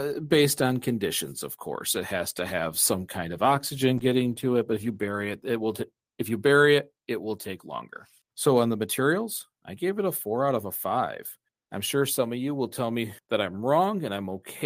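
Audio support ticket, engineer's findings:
Call bitrate drop, 3.98 to 6.73 s. Speech turns rough and watery, top end dulled, then clears. Probable component: Opus encoder under congestion control. Bandwidth estimate fell, encoder starved of bits, coarser coding plus high-frequency cutoff. Sound fits a fall from 64 to 23 kbps, bottoming out for roughly 1.4 s before recovery.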